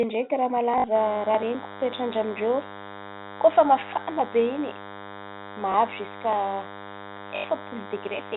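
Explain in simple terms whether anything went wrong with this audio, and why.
Packet loss with last packet repeated happens three times: at 0.78 to 0.84 s, 5.72 to 5.74 s, and 7.36 to 7.44 s. Pieces of sound went missing, 60, 20 and 80 ms long, and the phone filled each gap by replaying the last piece. The longer gaps cause a brief robotic stutter, and the single short one a small blip.

DECT cordless phone buzz runs from 0.95 s to the end. A nearby cordless phone sends tiny radio pulses 100 times a second. The audio circuit picks these up and turns them into a thin, steady buzz, quieter than the speech.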